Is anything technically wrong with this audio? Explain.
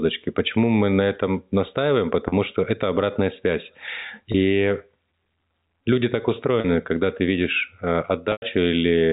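Yes. The speech briefly freezes into a held, buzzy tone four times: at 2.28 s and 6.6 s for 40 ms each, at 4.32 s for 20 ms, and at 8.32 s for 100 ms. In the last one the buzz fades toward silence before the speech cross-fades back. This is packet loss with pitch repetition. Packets went missing, and the receiver filled each hole by replaying the last pitch period and fading it down.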